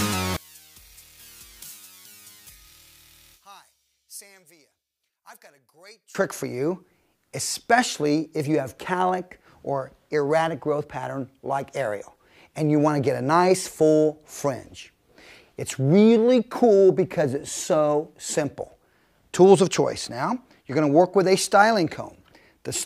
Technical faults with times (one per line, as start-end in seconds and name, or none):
0.37-6.15 one channel inverted